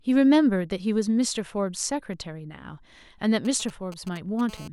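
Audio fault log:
3.45–4.41 s, GSM signalling bursts: A nearby 2G phone exchanges brief control traffic with the network, so it transmits only short clusters of radio bursts. Each cluster is rectified by the audio circuitry and comes through as a galloping dit-dit-dit of short 217 Hz buzzes, sitting roughly 20 dB under the speech. The stop-start rhythm comes from the phone keying its transmitter on and off rather than running continuously.
4.49–4.68 s, GSM phone buzz: A 2G handset now transmits steadily, as it does during a call, pulsing 217 times a second. The audio electronics demodulate those radio pulses into a hard, raspy buzz at 217 Hz, about 21 dB below the speech. Because the pulses are sharp-edged, the buzz carries a dense stack of harmonics, and it bears no relation to what is being said.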